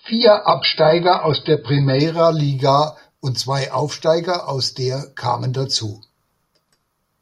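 From 0.0 to 2.0 s the adaptive stream starts at a low bitrate, consistent with about 16 kbit/s AAC, before stepping up to around 96 kbit/s. Until then the speech has nothing above 5.1 kHz and sounds dull and artefact-laden. At 2.0 s it brightens abruptly, without a gap.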